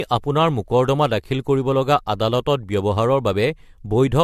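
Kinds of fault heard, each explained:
Generation loss: The speech sounds swirly and hollow all the way through, more smeared than a single lossy encode would leave it, and consonant attacks are soft and blurred. Nothing survives above 14.4 kHz. That fits AAC at around 64 kbit/s, and the likely cause is the audio being decoded and re-encoded a few times, with each pass quantising on a shifted frame grid so the noise and spectral gaps stack up.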